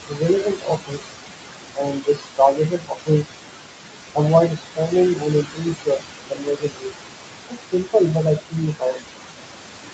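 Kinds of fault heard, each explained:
Noise suppressor artifacts: The suppressor pulls down about 21 dB in whichever bands it reads as steady noise, frame by frame. The room noise sits only about 5 dB under the speech, so the noise sinks between the words and rises under them.
Speech cut by the noise suppressor: It mistakes parts of the speech for noise and ducks them by about 19 to 22 dB, so they sound swallowed or faint. This happens at 0.00–1.13, 1.75–3.34, 4.48–4.94, 5.15–6.07, 6.29–7.08 and 7.49–9.18 s, losing up to about a second each time.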